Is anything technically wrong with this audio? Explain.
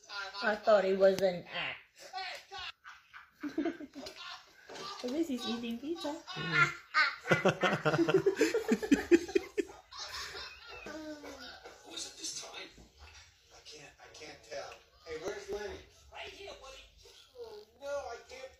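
Yes, there are two faults. Damaged data in a compressed stream appears at 3.58–3.64, 5.99–6.05 and 10.08–10.14 s. Corrupt frames make the decoder lose sync and search for the next frame header, causing brief glitches. From 11.29 to 18.51 s, periodic USB or driver dropouts skip about a millisecond every 0.249 s. That gives about thirty evenly spaced ticks.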